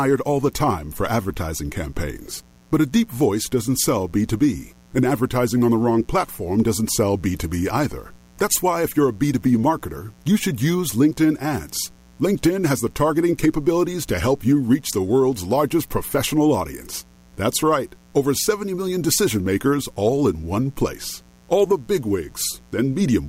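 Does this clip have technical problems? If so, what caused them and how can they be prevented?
Yes. Mains buzz runs throughout this speech clip: switching spikes from 60 Hz power add a raspy harmonic buzz, roughly 30 dB below the voice. Prevent it with shielded balanced cables, proper grounding and avoiding dimmers nearby.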